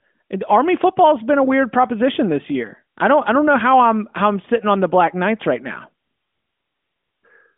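No technical faults can be heard in this recording.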